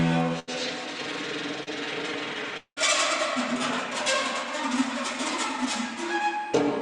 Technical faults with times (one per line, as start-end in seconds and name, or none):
0.39-0.49 burst of packet loss
1.63-1.69 short concealed packet loss
2.57-2.78 long network dropout